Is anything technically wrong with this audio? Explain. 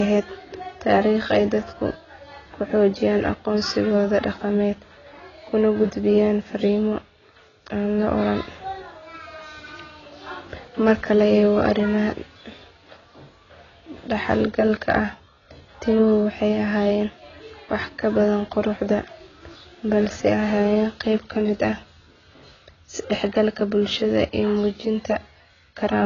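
Yes. The speech carries heavy AAC compression artefacts from start to finish. Nothing reaches above about 7.1 kHz, so the top of the spectrum is simply gone and the sound is dull. Sibilants turn fizzy, and sustained sounds warble. The likely cause is low-bitrate AAC-LC coding, which fits around 16 kbps. At that rate the encoder quantises its frequency lines coarsely, lowers the cut-off, and drops or patches bands, which smears the detail.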